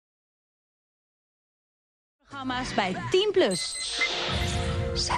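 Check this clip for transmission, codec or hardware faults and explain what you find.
One codec fault runs through the whole clip, including the smooth fade-in from about 2 s to 2.85 s. MP2 compression, throughout: likely from Layer II coding at a low rate such as 80 kbps, with too few bits shutting upper sub-bands on and off. The result is dull, gurgling and granular.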